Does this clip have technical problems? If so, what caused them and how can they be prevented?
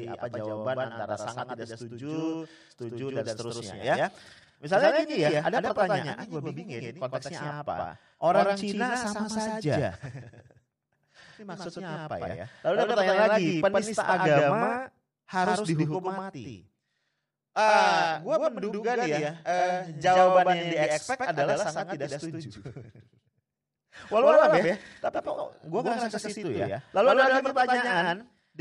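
Yes. The speech carries a doubled audio track throughout. A second full-band copy trails the original by about a tenth of a second, at roughly the same level. It has no decay and no room colour, so it sounds like a hard slapback rather than an echo. The likely cause is the same signal being captured twice, once through a slower path. To prevent it, route each source through only one input and mute any monitoring or loopback return.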